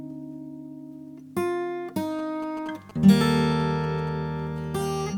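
From about 2.19 s to 4.09 s there are GSM signalling bursts: a nearby 2G phone handshaking with its network, its radio pulses getting rectified by the audio circuitry. You hear a galloping dit-dit-dit of short 217 Hz buzzes, sitting roughly 20 dB under the main sound.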